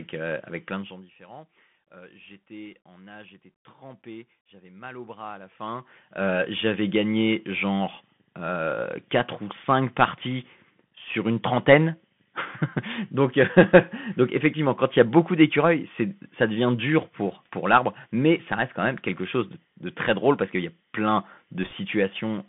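Throughout, the speech carries the Bluetooth CVSD headset codec: a band of about 150 Hz to 3.5 kHz, granular hiss and scratchy sibilants, which fits 64 kbps delta modulation rather than a smoother telephone codec. From 21.63 to 21.73 s, just after "qu'il y a plein", bit errors on a Bluetooth voice link add a brief rushing crackle, consistent with roughly one percent of bits flipped. It has no sharp clicks, unlike packet loss or digital dropouts.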